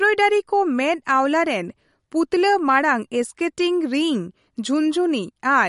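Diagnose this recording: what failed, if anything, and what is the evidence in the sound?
Codec stage. The speech has nothing above 11.2 kHz and swirls wetly throughout. This is likely MP3 compression stripping treble and weak detail, which fits about 48 kbps.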